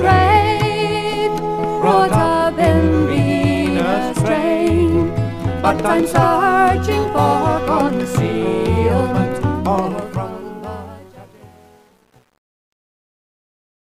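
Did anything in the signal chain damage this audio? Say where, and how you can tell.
Yes. The fade-out at the end shows truncation distortion on a fade, from a gain stage that reduced word length without dither. From 9.68 s onward the tail loses smoothness, and from 10.49 s to 13.9 s it turns gritty. This fits a stage that keeps about 9 bits. As the level falls toward the last few quantisation steps, the waveform collapses into square steps instead of decaying cleanly.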